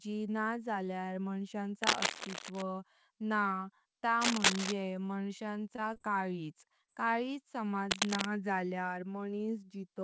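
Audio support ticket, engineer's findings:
Cable scratch noise, 1.83–2.63 s, 4.21–4.72 s and 7.91–8.26 s. Dense, uneven scratching over the speech, a few dB above it, and about 10 dB above it in the middle burst. Likely a worn cable or connector being moved, with contact resistance fluctuating. Spectrogram: ragged broadband smears. Waveform: spiky fuzz riding on the signal.

Short stall from a late packet, 5.06–5.12 s. Sound is held about 21 ms too long, then resumes where it left off, so nothing is lost. The jitter buffer ran dry and the last sound was stretched. Spectrogram: harmonics briefly frozen flat. Waveform: a repeated cycle.

Repeated packet loss (robotic sound), 5.47–6.02 s. Choppy stretch. Four holes, each about 20 ms at most, roughly 60 ms concealed in total. Each gap is patched by extending the previous sound before the next arrives. Spectrogram: striped, smeared harmonics. 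Waveform: periodic copies spliced in.

Short concealed packet loss, 6.86–6.90 s. A brief smear where about 20 ms never arrived in time. The decoder continued the prior sound, then cross-faded back into the real audio. Spectrogram: a short blurred column. Waveform: a slightly uneven patch. Band limit at 8 kHz throughout, consistent with 64 kbps G.722.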